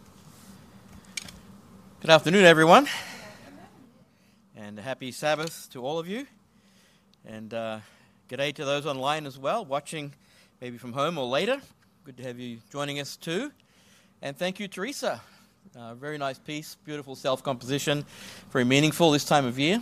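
From 17.08 to 17.72 s, zipper noise: a level change of about 10 dB ticks through unsmoothed 3 dB steps.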